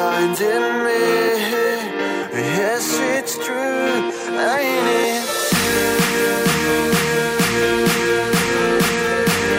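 No technical faults are audible.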